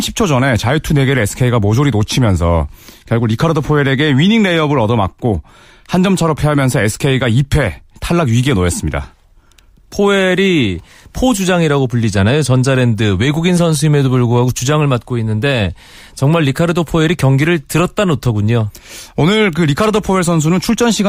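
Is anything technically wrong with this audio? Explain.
No, nothing technically wrong can be heard here.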